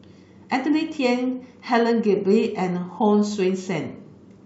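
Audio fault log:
No faults heard.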